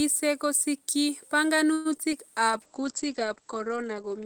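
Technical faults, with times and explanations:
1.73 to 1.87 s, call audio freeze: the sound stalls for 0.12 s and is stretched into a fading buzz, likely late packets draining the jitter buffer; spectrogram shows smeared, decaying harmonics, nothing lost.
1.97 to 2.00 s and 2.10 to 2.13 s, short concealed packet loss: about 20 ms each patched by continuing the previous sound, heard as brief smears; spectrogram shows blurred, flattened bands, and the second patch returns to the real audio almost at once.
2.49 s to the end, call bitrate drop: coding falls from 32 to 10 kbps and bandwidth from 20 kHz to 8 kHz, giving muffled, watery sound; spectrogram shows energy cut off above 8 kHz.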